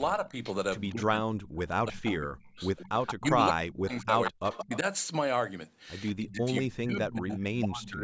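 Speech suppressed in double talk starts at 0.27 s with a slight dip lasting to 0.33 s, then returns much more deeply from 0.91 to 2.58 s, where the sound sinks by roughly 35 dB over about a second and a half. This is likely an echo canceller hearing both sides at once, failing to tell the local talker from loudspeaker echo, and turning everything down.

Echo leak follows from 2.78 to 3.28 s as a delayed copy trailing the sound by 174 ms, only a few decibels below it. The likely cause is a loudspeaker on one side whose canceller let part of the pickup through.

Suppression strikes again from 3.19 to 4.85 s, the deepest, near 40 dB, with an echo leak inside it from 4.25 to 4.78 s. A weaker leak, about 10 dB down, runs from 6.07 to 6.61 s. The last suppression, from 6.19 to 8.03 s, drops about 30 dB and covers that leak's tail. A faint echo from 7.18 to 7.39 s sits within it, far below the sound, all within a band that stops at 8 kHz.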